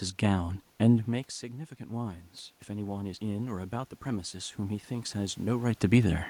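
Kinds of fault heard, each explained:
Automatic gain rising: after the speech level at the microphone fell by about 14 dB, around the time the talker moved back near 1 s, the gain control slowly pushed its gain up by about 8 dB between 0.37 and 5.76 s. Voice and room noise swell together. On a waveform the envelope widens steadily over those five seconds; on a spectrogram the noise floor between syllables brightens along with the speech bands.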